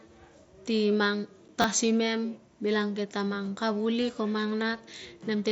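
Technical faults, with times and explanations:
1.48 s, unconcealed Bluetooth headset packet loss: a single voice packet between headset and phone failed to arrive, and nothing was done to cover the gap, so about 7.5 ms of speech was replaced by silence or an idle pattern. The result is a tiny hole with abrupt edges in the speech. It is an isolated drop, so it does not build into crackle.
1.62–1.64 s, repeated buffer: fresh audio did not reach the output in time, so the device replayed the last buffer instead, which fits a 10 ms buffer sounding twice more. The same short slice of speech is heard three times in a row with a hard join at each repeat, and roughly 20 ms of new audio never gets played. It comes across as a quick stutter, riding on the band-limited mSBC headset sound.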